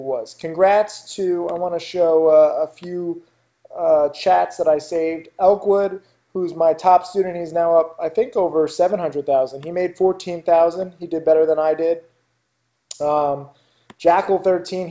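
No technical faults can be heard in this audio.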